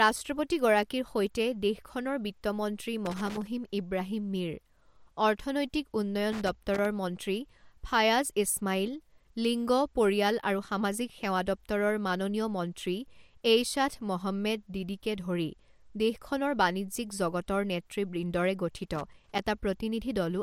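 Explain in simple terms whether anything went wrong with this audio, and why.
Three short bursts of crackling and scratching break into the speech, at about 3.06 to 3.47 s, 6.32 to 6.86 s and 18.95 to 19.39 s. This is loose connector crackle: a worn or dirty contact keeps touching and separating as it moves, chopping the sound on and off.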